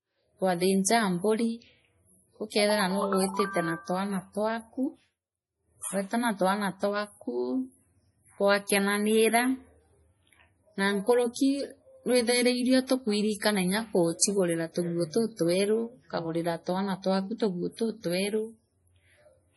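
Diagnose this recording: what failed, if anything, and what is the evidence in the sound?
The speech sounds watery and swirly throughout, with nothing above 11.5 kHz, and heavy codec damage that points to low-bitrate MP3 compression, likely around 32 kbps. The codec stage is at fault: short of bits, the encoder cuts the treble and drops weak frequency lines frame by frame.

Short hisses lead sharp attacks at 0.83 to 0.86 s, 11.33 to 11.36 s and 14.19 to 14.21 s, each spreading roughly 30 ms early. This pre-echo also comes from the codec: quantisation noise sized for each loud onset smears across its whole block, filling the quiet moment before it.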